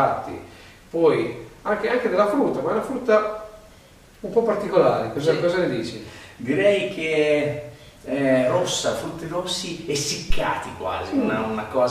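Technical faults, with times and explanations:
10.30–10.42 s phantom power thump: a supply switched on or off on a live input sends a step through the coupling capacitors, producing a deep thump peaking near about -8 dBFS that decays within 27 ms. It shows as a lopsided waveform swing and a low-frequency spectrogram blotch.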